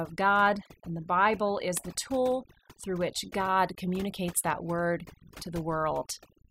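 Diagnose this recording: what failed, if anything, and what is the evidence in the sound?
Throughout, the background drops and breaks up into twinkling specks: overdone noise removal at the processing stage, gating out bands near the noise estimate.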